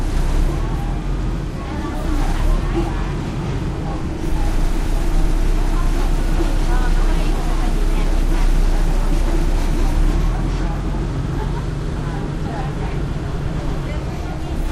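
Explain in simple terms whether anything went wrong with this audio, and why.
Nothing went wrong here: listening all the way through, there's no glitch, dropout or distortion anywhere in the sound to point to.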